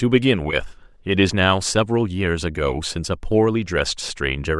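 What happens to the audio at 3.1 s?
Nothing goes wrong at 3.1 s; the speech there plays through intact, with no dropout, click or distortion.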